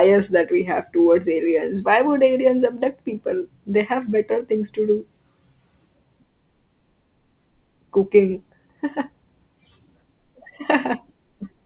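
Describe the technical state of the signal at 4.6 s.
At 4.6 s the speech is intact, with no fault present, only the narrowband sound of the G.711 call path, which carries nothing above 4 kHz.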